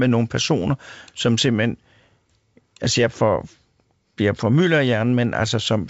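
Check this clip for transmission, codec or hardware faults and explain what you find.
Nothing faulty can be heard in the speech, which arrives over G.722 wideband telephone coding at 64 kbit/s with at most a faint trace of that coding.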